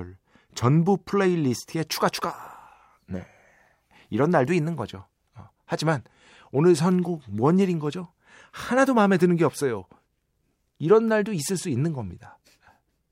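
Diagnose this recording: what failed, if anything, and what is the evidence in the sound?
Nothing failed; no faults heard.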